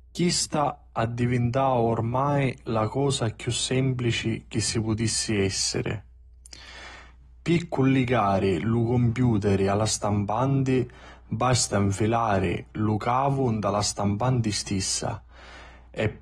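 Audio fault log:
throughout, mains hum: A ground loop or nearby transformer is letting the 60 Hz power line leak into the signal path. It sits under the speech as a constant low drone, with a few low harmonics, at about 25 dB below the speech level.
throughout, AAC compression: The audio was likely coded with AAC-LC at a bitrate around 32 kbps, which discards detail the hearing model judges inaudible. Nothing remains above 12.4 kHz, so the speech sounds dull and smeared, with audible warbling and fizz on sibilants.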